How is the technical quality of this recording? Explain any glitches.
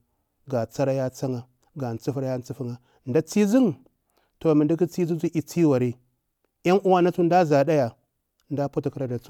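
No technical glitches can be heard in this recording.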